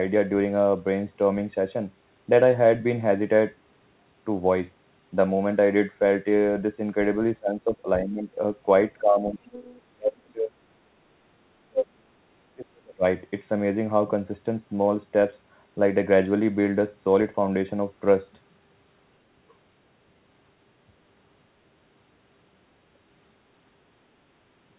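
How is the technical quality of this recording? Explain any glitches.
The recording has two related glitches in the middle of the speech, both around 7 to 13 s. The whole thing runs through a narrowband call path, with nothing above 4 kHz, which fits a G.711-type telephone codec.

Speech suppressed in double talk hits at 7.4–8.29, 9.01–9.45, 9.89–10.63, 11.69–12.25 and 12.44–13.04 s. The talker's level ducks hard, from about 15 dB early on to roughly 40 dB later, with near-dropouts. That's likely the echo canceller clamping down while both sides talked at once.

The other side's voice leaking through comes in briefly at 9.46–9.81 s, a faint second voice roughly 20 dB under the main speech. It's likely loudspeaker pickup that the echo canceller didn't fully scrub from the microphone, right between two suppression dips.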